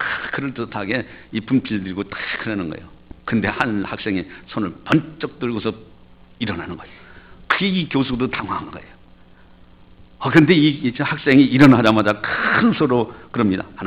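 Hard clipping occurs four times, where the signal exceeds what a stage in the chain can pass and its peaks are sliced flat. Brief ticks come at 3.61 s (about 2 dB over) and 7.51 s (about 1 dB over). Longer stretches run from 10.37 to 10.52 s (about 6 dB over) and from 11.31 to 12.10 s (about 8 dB over). The squared-off tops add high harmonics, so the short events sound like crackle and the later ones like harsh fuzz on the loud sound.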